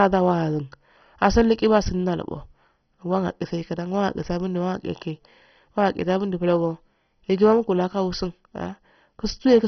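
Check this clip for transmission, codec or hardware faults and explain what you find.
One codec fault runs through the whole clip. The speech sounds dull and gurgling, with nothing above 6.1 kHz. This is likely MP2 compression at a starved bitrate, fitting roughly 32 kbps. Upper sub-bands are switched off, and the remaining bands are coarsely quantised. That leaves heavy granular, flickering distortion.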